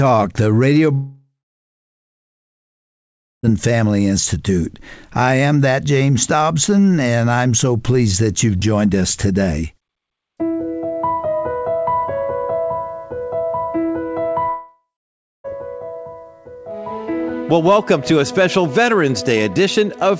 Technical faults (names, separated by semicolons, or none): long network dropout